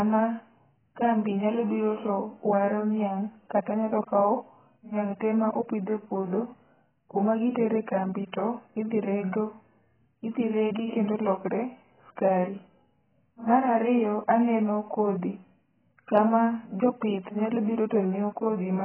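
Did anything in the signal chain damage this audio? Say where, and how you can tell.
Yes, codec stage: the speech is dull and smeared throughout, with a flat spectrogram ceiling at 3.9 kHz, likely heavy AAC compression at a low bitrate.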